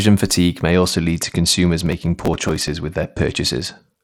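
Right after "fatigue may", at 0.72 s, the speech turns dull and gritty and stays that way to the end. This is a Bluetooth SBC bit pool drop. The link's encoder starved its upper sub-bands and quantised the rest coarsely, which fits a bit pool cut from 28 to 11, near 90 kbps.

From 1.86 s to 2.70 s a burst of dense crackle and tearing rides on the dulled speech. This is processor overload crackle. Dozens of very short buffers, each around a millisecond and a half, missed their deadlines and were skipped, leaving tiny hard-edged gaps.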